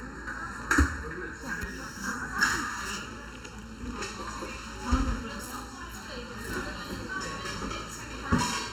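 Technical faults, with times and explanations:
Throughout, channel delay (comb filtering): one channel arrives under a millisecond late, so the mono sum cancels near 700 Hz and at evenly spaced multiples, giving fixed hollow notches rather than a gentle treble loss.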